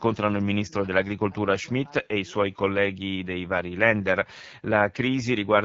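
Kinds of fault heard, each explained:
AMR wideband (HD Voice) codec: throughout, the speech sounds rough and raspy because a pulse-excited vocal tract model rebuilds it, with noise filling the top band and nothing above 7.2 kHz. The plainly audible damage fits AMR-WB at about 8.85 kbit/s.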